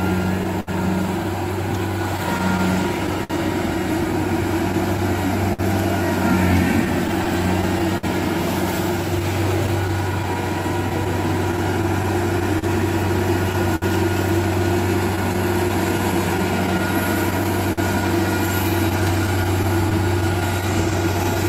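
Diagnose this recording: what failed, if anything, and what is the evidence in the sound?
Clock drift between sender and receiver, at the receiver's jitter buffer: the sender's clock runs about 4 percent slow, so the buffer keeps draining and small hiccups recur at uneven intervals through the whole clip. Unlike packet loss, the disturbance recurs throughout and comes from steady underrun rather than isolated holes.

Scattered short gaps, at the network stage: from 0.43 s to 21.37 s, around fifty brief holes were filled by extending the preceding sound, about a second in total, the longest around 70 ms. These sound like isolated smears or ticks at random points, unlike drift's recurring timing hiccups.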